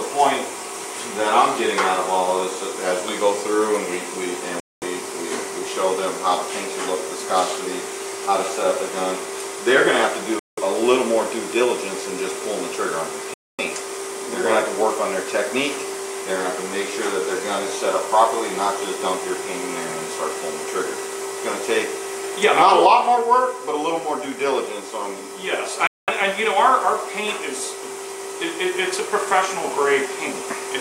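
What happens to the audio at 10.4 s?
A Bluetooth stall occurs from 10.39 to 10.59 s. The sound cuts to silence for 182 ms and then resumes. The likely cause is radio interference delaying packets until the headphones' buffer ran empty, so playback paused until the retransmitted data arrived.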